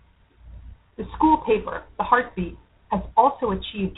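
G.726 ADPCM damage runs through the whole clip. The speech is coded as a few bits of difference from an adaptive prediction, and the harsh, rasping hiss that tracks its level fits the 24 kbit/s rate. Nothing above 4 kHz survives.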